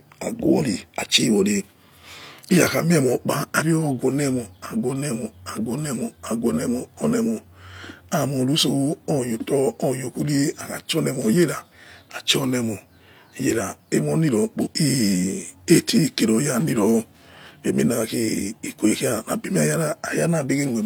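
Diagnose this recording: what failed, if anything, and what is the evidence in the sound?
The compressed speech stream carries damaged data at two points, so the codec stage fails there: the decoder misreads the corrupted frames, loses sync and hunts for the next frame header. Each failure sounds like a brief chirp, squawk, click or short hole, heard at 3.56–3.63 s and 14.61–14.68 s.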